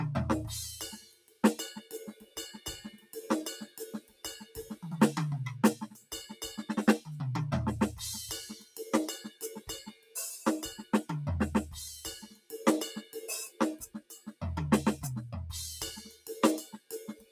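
A noise suppressor applied to music stays active throughout, mistaking sustained parts and ambience for noise and swinging the level by roughly 15 dB, so the music pumps. Sound cut by the noise suppressor appears at 0.95–4.77 s, 5.91–6.43 s, 8.54–10.16 s, 12.21–14.41 s and from 16.05 s to the end, sinking by about 14 to 17 dB with tails cut short.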